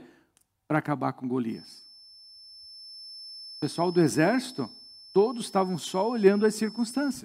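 A feedback whistle enters at 1.45 s and continues to the end of the clip: a thin, steady tone near 5.3 kHz sitting well beneath the speech, roughly 20 dB down, swelling and fading slowly in level. The likely cause is sound from a loudspeaker reaching the microphone with enough gain to sustain that single frequency, held just short of the point where it would build into a runaway howl.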